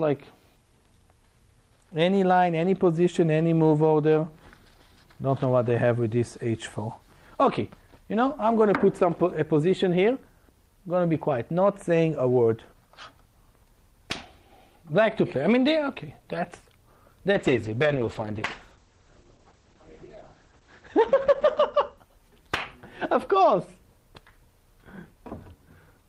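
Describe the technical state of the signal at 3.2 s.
At 3.2 s the signal is intact, with no audible technical fault at that point.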